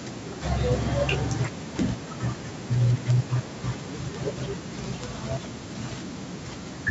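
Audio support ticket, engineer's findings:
Speech path through the call microphone processing is within normal behaviour, with the expected high-pass roll-off of the lowest bass.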